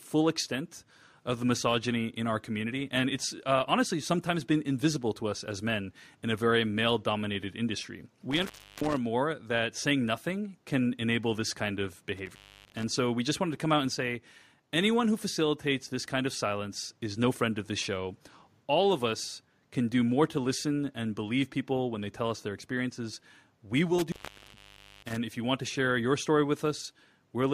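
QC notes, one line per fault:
8.31–8.97 s, intermittent contact: after "very male dominated industry" the signal drops out for about 0.35 s with crackle at both edges. A loose connection briefly opens, leaving faint hiss. The waveform collapses to a thin band, and the spectrogram shows vertical clicks framing a near-empty gap before "more that saying nothing".
12.17–12.83 s, intermittent contact: after "enable this kind of" the contact opens for about 0.30 s, cutting the sound with crackly edges and leaving low hiss. The waveform shows spiky bursts around a flat stretch, and the spectrogram shows broadband streaks before "so we just wanted".
23.99–25.17 s, intermittent contact: the longest break leaves the line open for about 0.91 s, so only faint hiss remains between crackling make-and-break points before "if you want to". The waveform shows a wide flat gap edged by sharp transients.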